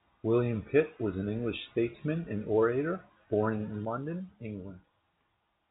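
A sudden gain jump occurs at 3.85 s, right after "and orator born in". The level drops by about 5 dB in a single step and stays down until the clip ends at 5.71 s. The speech and the background noise fall together, so the whole picture shrinks at once. The likely cause is a gain change applied between two samples with no ramp. The narrow telephone band, with nothing above 3.8 kHz, carries through the drop unchanged.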